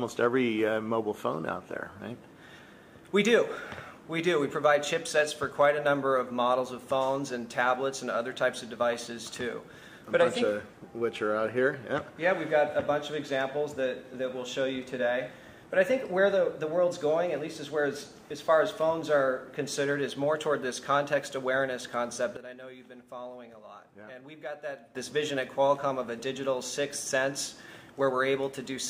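At 22.37 s the level drops abruptly by about 14 dB, with the background noise falling in step, and at 24.95 s it jumps back up just as suddenly. This is a sudden gain jump, likely a digital gain setting applied from one sample to the next without any ramp.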